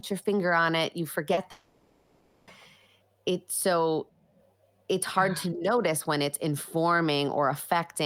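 At 1.33 to 1.39 s there is a short concealed packet loss: about 40 ms of speech failed to arrive and the decoder patched it by extending the preceding sound. It is heard as a brief smear, and a spectrogram shows the preceding sound held flat across the gap.

From 1.51 to 2.49 s, nearly a second of speech is replaced by a continued buzz or hiss with no true silence, then the speech resumes further on. This is likely a long network dropout, with concealment filling all 960 ms. The waveform looks smooth and repetitive, and the spectrogram shows static smeared bands.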